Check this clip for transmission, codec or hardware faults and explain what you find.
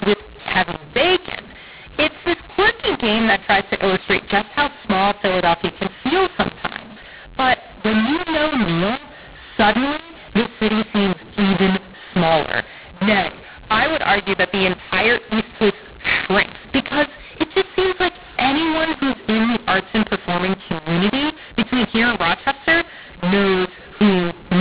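One fault runs through the entire clip: a mu-law and A-law mix-up. The speech was coded as A-law but decoded as mu-law. Each 8-bit code therefore maps to the wrong level, so some samples come out too loud and others too soft. Speech sounds harsh and gritty, quiet samples are lifted well above silence, and pauses fill with hiss. Ordinary clipping damages only the peaks, and line noise sits at a fixed level. Here the distortion scrambles every level, and the sound stays limited to the 4 kHz telephone band.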